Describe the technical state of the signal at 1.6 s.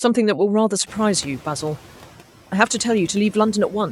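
At 1.6 s the noise suppressor is still catching up, within a span running from 0.86 to 1.78 s. The room noise jumped about 24 dB at roughly 1 s, and the suppressor's noise estimate lags over 920 ms, so the noise passes with only about 4 dB of reduction before sinking.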